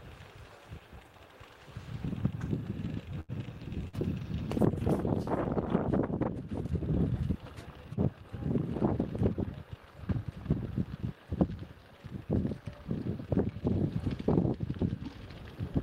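At 3.20 s the audio freezes into a held, smeared continuation of whatever came just before, sinking in level until it breaks off at 3.31 s and picks up again further along, with a stretch of the original simply absent. This is a burst of packet loss: roughly 80 ms of audio arrived too late or never arrived, and the receiver bridged the hole by extending the last sound and fading it down, then resumed past the missing section.

A second, much shorter disturbance follows at 3.88 s, lasting until 3.96 s: a brief smear or wobble rather than a held tone, with a sliver of sound seemingly clipped out. This is short concealed packet loss. About 40 ms never reached the decoder in time, so the receiver synthesised a continuation of the preceding sound for around 44 ms and blended it back into the real signal as soon as packets returned.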